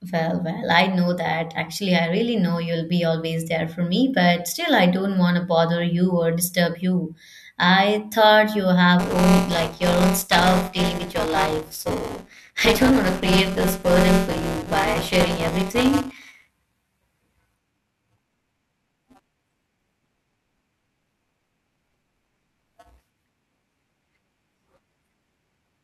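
At 8.99 s, after "thought you", buffer tearing runs to the end. Audio about 15 ms old splices into each period, producing a 200 Hz rattle with regularly spaced waveform breaks.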